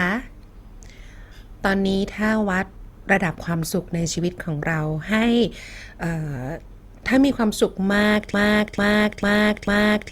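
From 8.34 s to the end, a broken-record loop repeats the same 0.45 s fragment four times, identical and undecaying unlike echo, likely from a stalled stream.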